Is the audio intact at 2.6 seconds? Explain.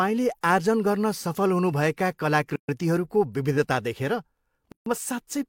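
No. A gap at a join of encoded pieces runs from 2.56 to 2.69 s, a silence of about 130 ms cutting into the speech. Two separately encoded segments were spliced without trimming, so the encoder's start-up delay and the padding of the previous segment's last frame both remain as dead air. The speech stops with a smeared edge, falls silent, then resumes exactly where it stopped.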